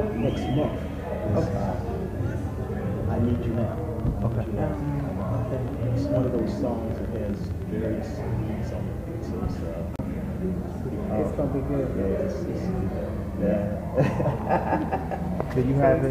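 From 3.25 to 7.86 s, a train of clicks ticks over the sound at about 9.6 per second, unevenly spaced, roughly fifty pulses. Likely interference or a faulty connection or power supply.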